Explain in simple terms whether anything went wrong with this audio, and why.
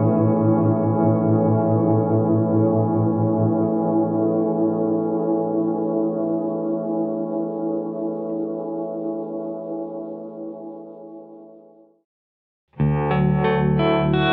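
Nothing went wrong here.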